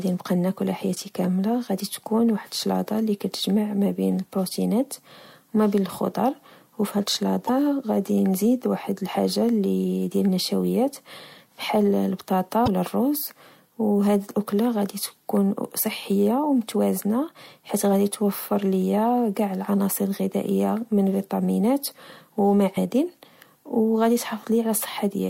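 Damaged data in the compressed speech stream makes the decoder misread frames, lose sync and hunt for the next frame header. Each time, a brief glitch replaces the sound. It happens from 7.45 to 7.49 s, between "وما بين الخضر وفهاد" and "غدي نزيد واحد الحاجة"; again from 12.64 to 12.68 s; and as a shorter blip at 22.77 s, right after "الغذائية من فيتامينات و".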